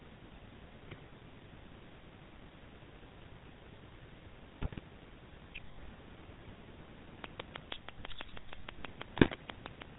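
Throughout, the GSM full-rate codec leaves a buzzy, gravelly roughness on the speech; the spectrogram shows nothing above 4 kHz, with pulsed, coarse harmonics below.

GSM bit errors hit at 0.88 to 1.01 s and 4.62 to 4.80 s: corrupted decoder values produce squawks and gargling, seen as smeared spectral blotches and sudden level jumps.

From 7.24 to 9.83 s a regular train of clicks ticks about six times a second, around fifteen sharp spikes about 10 dB above the speech, likely from interfering equipment. A further burst of GSM bit errors garbles 9.16 to 9.36 s.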